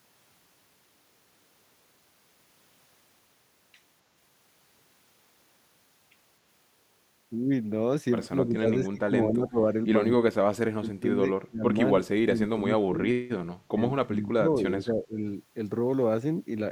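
Speech suppressed in double talk affects this speech at 8.41–9.57, 10.22–10.33, 10.69–11.21, 11.47–11.75, 12.22–13.01, 13.7–13.81 and 14.03–15.16 s, where the voice dips by roughly 25 to 40 dB. The likely cause is an echo canceller that mistook the talker for loudspeaker echo while both sides spoke.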